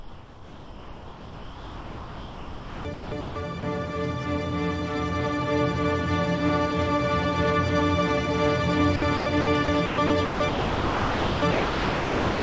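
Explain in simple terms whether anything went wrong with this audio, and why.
The sound turns choppy twice, from the start to 3.63 s and again from 8.96 s to the end. Real sound keeps dropping out and is replaced by a flat, steady hiss. Most of each stretch is filled this way: about 3.2 s of the first and about 2.4 s of the second. This is likely sound chopped by the voice detector. The sender's system decided the sound was too quiet to be worth sending and switched on and off several times, and the receiving end filled each gap with comfort noise. The call connection itself carries nothing above 8 kHz.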